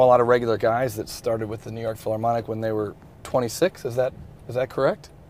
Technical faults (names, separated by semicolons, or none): none